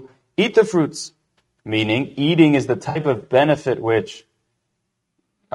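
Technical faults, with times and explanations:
Throughout: low-delay AAC compression, likely AAC-ELD at a low bitrate; rough, grainy speech, with noise filling the gaps between harmonics on a spectrogram and a thin, synthetic top band.
Throughout: sample clock jitter; faint hiss about 45 dB below the signal, riding loud and bright passages, gone in pauses, seen as a level-tracking noise floor that clears in silence.
2.89–2.99 s: AAC frame loss with concealment; between "meaning eating is the" and "of benefit which" about 60 ms is refilled from the previous spectrum, giving a smeared, phasey patch with blurred harmonics on a spectrogram.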